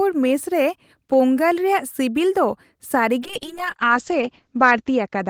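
At 3.22 s a call bitrate drop begins and lasts to the end of the clip at 5.3 s. The encoder is forced to spend far fewer bits, and the change in sound is consistent with a fall from about 32 kbps to about 8 kbps. The speech turns coarse and watery, and the top end is cut off above 8 kHz instead of extending to 20 kHz, so it sounds muffled. The worst quality holds for about 1.27 s.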